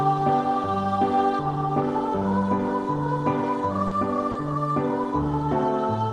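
Short concealed packet loss occurs twice, at 3.87–3.94 s and 4.31–4.38 s: about 40 ms never arrived and the decoder extended the preceding signal, leaving brief smears or wobbles.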